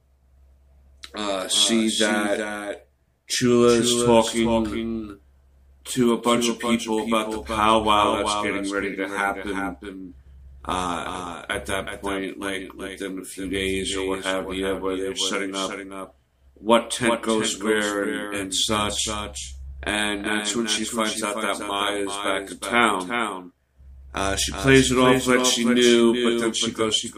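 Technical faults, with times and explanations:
Throughout, doubled audio track: a single full-band copy trails by roughly 0.4 s, a few dB quieter, with no decay or room colour unlike echo, likely from a second, slower capture path.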